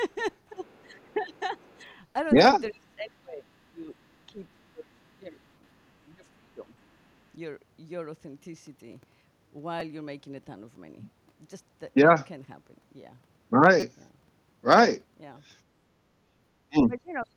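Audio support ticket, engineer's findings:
Speech suppressed in double talk at 0.51–1.56, 2.7–5.42, 6.15–6.63 and 16.68–17.32 s. Near-end speech dips by about 15 to 30 dB. Likely cause: the echo canceller ducking during overlap. The talker's own speech drops, not just the room.

Other side's voice leaking through at 0.66–0.79 and 1.7–1.74 s. A very faint second voice is audible. Likely cause: incomplete echo cancellation. A separate voice is added, rather than the near-end voice being removed.

Repeated buffer at 1.86 s, 9.8 s and 13.80–13.82 s. There are short stutters or clicks, growing from one to four repeats, which fits a 256-sample (5.3 ms) buffer. The audio repeats rather than going silent, which sets it apart from a dropout.

Background gated by the echo canceller at 16.25–16.36 s. The room sound dips by about 8 dB while the loudspeaker plays. Only the background drops, not the speech, which sets it apart from double-talk suppression.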